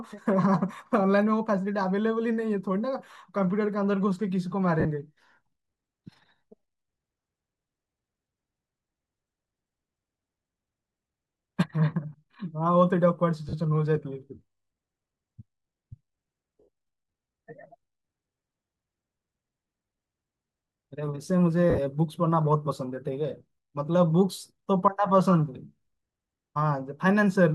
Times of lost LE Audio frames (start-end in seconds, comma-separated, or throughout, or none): 4.80-4.85, 13.49-13.53, 16.60-16.68, 19.86, 21.70-21.78